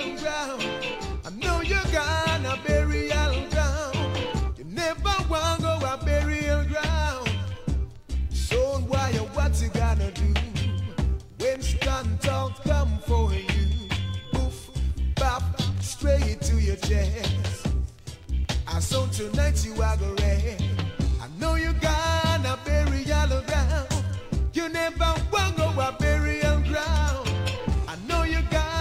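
From 12.22 to 14.99 s a feedback whistle appears: a thin 3.4 kHz tone about 25 dB below the sound, swelling and fading slowly in level. Likely a loudspeaker-to-microphone loop poised at the edge of feedback; unlike a runaway howl, it never builds.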